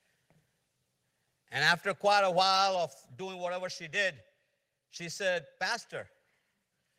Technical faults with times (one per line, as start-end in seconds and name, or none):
2.13 microphone volume stepped down
3.15 microphone volume stepped down